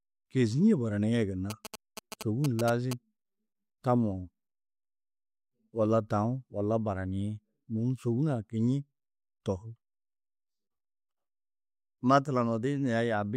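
GSM signalling bursts run from 1.50 to 2.93 s, just after "kêzie baraniĩ gunna". A nearby 2G phone is sending short clusters of radio bursts, and the audio circuitry rectifies that RF into the signal path. The result is a galloping dit-dit-dit of brief buzzes at about 217 Hz, sitting roughly 10 dB below the speech. The sparse, grouped rhythm points to a handset signalling to the network rather than carrying a call.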